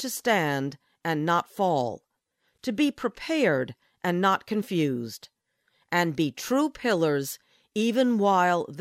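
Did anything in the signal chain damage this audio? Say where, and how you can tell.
No, nothing in the signal chain audibly damaged this speech recording. There is no point in the clip where any stage, from wiring through to playback, leaves a mark that can be heard.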